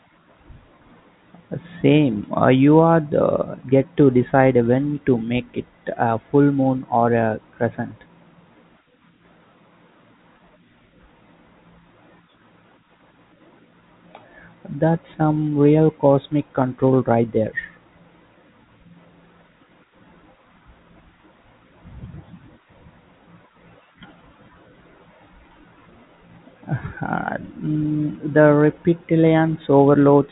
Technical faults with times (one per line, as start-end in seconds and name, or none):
none